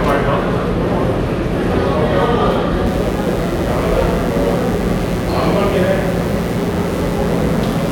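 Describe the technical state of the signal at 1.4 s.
At 1.4 s the signal is intact, with no dropout, clipping, distortion or other fault affecting the sound at that moment.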